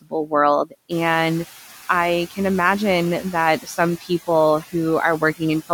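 Right from the start there's noise suppressor artifacts running through the whole clip: the background gets pulled down by about 7 dB frame by frame, so what's left dips between words and swells under them.

In the first moments, from 0.02 to 0.32 s, you get speech cut by the noise suppressor. It mistook bits of the speech for noise and turned them down with the background, at worst by about 19 dB over roughly 150 ms in total, so those sounds come out swallowed and faint.

Then from 0.9 to 1.43 s, just before "I can", the noise suppressor is catching up. The room noise jumps by about 12 dB around 1 s, and the noise estimate lags, so the louder noise comes through with less reduction at first before settling back down over about 530 ms.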